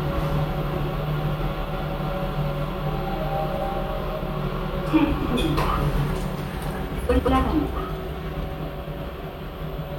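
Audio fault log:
1.24 to 8.58 s (at 1.24, 3.52, 5.21, 7.09 and 8.44 s), frames out of order: two adjacent blocks, each 46.4 ms for the first three, 92.9 ms and 69.7 ms for the last two, play swapped, giving a garbled flutter. Waveform and spectrogram show abrupt discontinuities there, with no lost time.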